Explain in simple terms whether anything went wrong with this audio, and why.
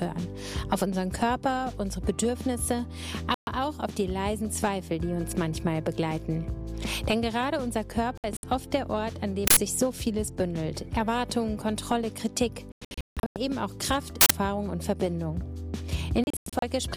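The sound cuts out to silence four times: briefly at 3.34 to 3.48 s, then in a cluster of short holes between 8.18 and 8.44 s, a longer broken stretch from 12.72 to 13.36 s where about half a second in total goes missing, and again in pieces from 16.24 to 16.63 s. This is a digital broadcast dropout. The receiver lost the signal or got damaged data, so it muted itself until clean data arrived. Whatever was sent during those holes is gone for good.

Twice there is a sudden, loud blast of harsh digital noise lasting under a tenth of a second, at 9.47 s and again at 14.21 s. This is an uninitialised buffer. The player sent out a chunk of memory before any real audio had been written into it, so leftover junk data was played as sound. The burst length fits a 4096-sample block.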